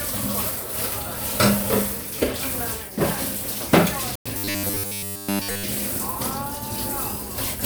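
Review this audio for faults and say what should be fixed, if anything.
At 4.15 s the sound drops to silence for about 100 ms, resuming at 4.26 s. That's the shape of a Bluetooth stall, likely radio interference delaying packets until the headphones' buffer emptied and playback froze. Keeping the phone close, away from crowded 2.4 GHz gear, avoids it.

From 4.38 to 5.64 s there's robotic sound from repeated short buffers: a rigid buzz pinned at 100 Hz, which fits a roughly 10 ms chunk being looped while most of the real audio goes missing. A larger output buffer prevents the looping.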